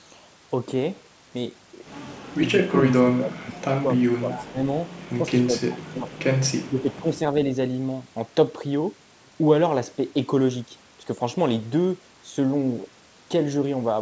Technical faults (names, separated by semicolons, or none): speech suppressed in double talk; echo leak